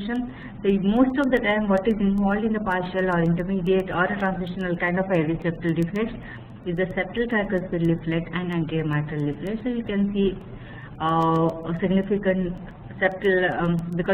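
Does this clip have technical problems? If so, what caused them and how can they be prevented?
Yes. There are word clock ticks. The receiving device is running on its own clock rather than locking to the digital input, and the two clocks differ by something on the order of 150 ppm. Each time they drift a full sample apart, one sample is dropped or repeated. This puts a short tick into the sound roughly every 0.15 s, from 0.16 s to 14.06 s, around a hundred of them, each sharp and of uneven strength. To prevent this, set the receiving device to sync to the incoming digital signal, or run both devices from one shared word clock.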